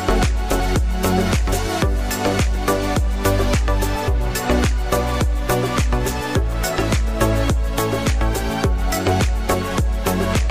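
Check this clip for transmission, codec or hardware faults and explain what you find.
There are three skips, at 0.6 s, 1.52 s and 4.08 s, and they sound like a likely dropped buffer (overrun). At each one the sound jumps forward, with no gap of silence. The capture side wasn't pulling samples fast enough, so a chunk got overwritten and the two ends were spliced together. The first and third lose roughly 40 ms. The middle one is bigger, around 70 ms.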